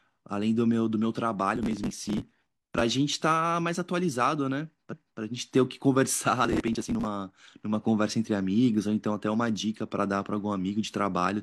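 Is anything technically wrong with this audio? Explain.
Yes, there are two kinds of trouble in this speech. From 1.56 to 2.81 s and again from 6.45 to 7.05 s there's processor overload crackle: the machine kept missing deadlines on tiny buffers, around 5 ms each, and dozens got skipped, leaving hard-edged gaps that stack into a gritty, tearing crackle over the speech.

Then at 4.88 to 5.16 s you get repeated frames: a run of six compressed frames, about 279 ms of audio, was played twice. It comes across as a stutter, and it stretches the audio by that same 279 ms.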